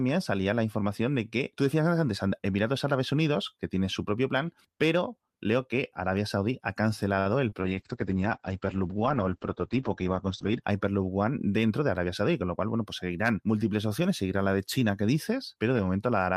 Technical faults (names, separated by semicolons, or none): short concealed packet loss; call bitrate drop; jitter buffer speed-up